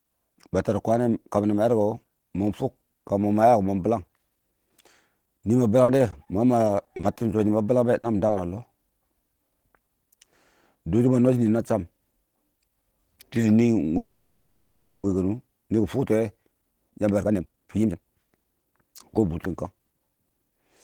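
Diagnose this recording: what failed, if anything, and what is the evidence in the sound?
From 5.83 to 7.19 s the speech turns choppy and robotic. This is repeated packet loss at the network stage: eight gaps of up to 50 ms, each patched by extending the previous sound, covering about 15% of the stretch. Unlike an isolated loss, the holes follow closely, so the artefacts run together.

Short concealed packet loss occurs at 8.01, 8.17 and 8.27 s. Each is a separate 20 ms hole, bridged by continuing the last sound and blended back in, and heard as a brief smear or wobble. These stand apart as single events rather than the continuous robotic texture heard just before.

A call audio freeze runs from 13.98 to 15.06 s. The sound stalls into a fading buzz or hiss for about 1.06 s, then resumes where it stopped with nothing missing. This is likely caused by delayed packets emptying the jitter buffer. 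Unlike loss, the delay grows instead of content vanishing.

A jitter buffer speed-up runs from 16.62 to 20.59 s. The speech plays at about 125% speed with unchanged pitch and sounds hurried. The receiver trims pitch-period slices to shed roughly a second of built-up delay. A sample-rate fault would raise the pitch as well.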